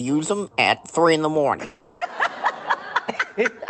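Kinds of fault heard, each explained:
Long network dropout: from 1.65 to 2.03 s, roughly 0.36 s of the audio is missing. The gap never falls to silence: the receiver fills the whole hole by stretching the last sound into a buzzy, fading continuation. The audio then resumes with that stretch simply gone. The likely cause is a run of packets lost on the network. Throughout the clip, the call codec cuts off the high frequencies near 8 kHz.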